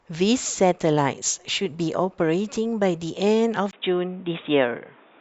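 Speech, and from 3.71 s to the end at 5.20 s it abruptly turns dull and boxy, with a brief gap of about 20 ms at the transition. After that point nothing is present above 3.8 kHz, and a new noise floor appears roughly 35 dB below the signal, while overall loudness stays about the same. The likely cause is an input switched to a poorer device, such as another microphone or a headset's call profile.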